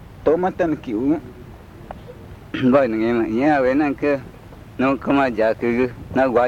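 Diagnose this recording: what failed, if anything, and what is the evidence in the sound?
Listening through, nothing stood out as a fault at any stage of the chain.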